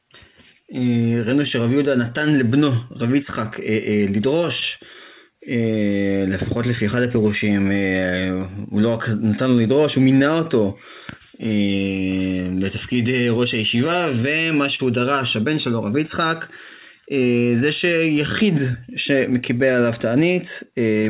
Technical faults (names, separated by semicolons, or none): clock drift between sender and receiver; repeated timing corrections; short stall from a late packet